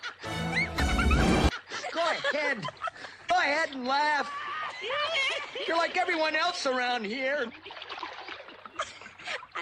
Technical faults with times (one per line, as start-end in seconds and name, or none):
0.75-0.80 damaged data in a compressed stream
3.25-3.31 damaged data in a compressed stream
7.96-8.01 damaged data in a compressed stream